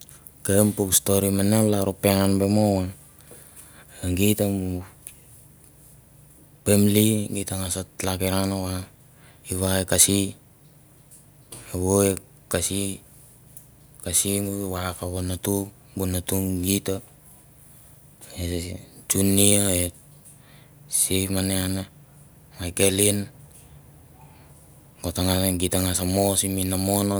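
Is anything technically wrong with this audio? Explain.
No, nothing technically wrong turns up anywhere in this speech recording, so there's nothing to flag here.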